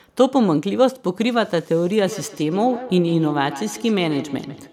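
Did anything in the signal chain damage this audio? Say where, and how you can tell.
Yes. From 2.02 s to the end, this speech carries feedback echo between two devices, a call-processing fault. Each sound returns about every 150 ms, thinner and ringing, peaking about 13 dB below the speech. A second nearby device replays the microphone's signal, and the local echo canceller ignores it.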